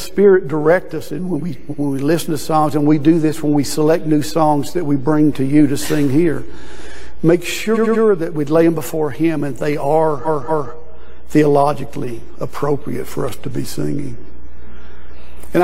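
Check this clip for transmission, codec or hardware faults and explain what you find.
The clip has repeated frames, heard as stutters. A short block of compressed frames is played again, so the same fraction of a second recurs. At 1.70 s a 93 ms block repeats once. At 7.73 s a 93 ms block plays three extra times, adding 279 ms. At 10.24 s a 232 ms block plays twice more, adding 464 ms. These block lengths fit two frames and five frames respectively.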